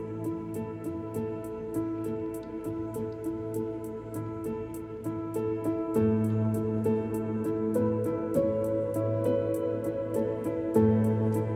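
No technical faults can be heard anywhere in the recording; the signal stays continuous and steady throughout.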